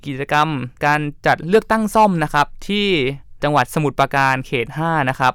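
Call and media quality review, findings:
Nothing stood out on listening to this speech recording.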